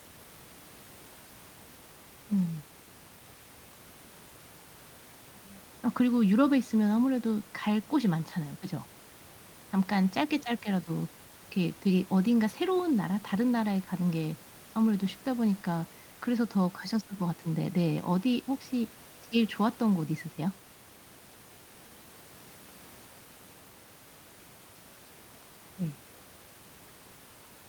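Nothing in this speech recording points to a technical fault, and the only thing underneath it is the room's own background noise, sitting about 23 dB below the speech.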